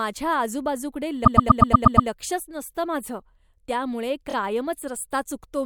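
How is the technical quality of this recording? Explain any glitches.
The recording has two repeated-frames faults, where a run of compressed frames was sent again and the decoder replayed it. From 1.24 to 2.08 s, just before "नसतं माझं त्यामुळे", a 120 ms block, which fits about five frames, loops seven extra times, adding 840 ms of stutter. From 4.29 to 4.34 s, just after "नसतं माझं त्यामुळे", a 24 ms block repeats twice more, a brief 48 ms hiccup.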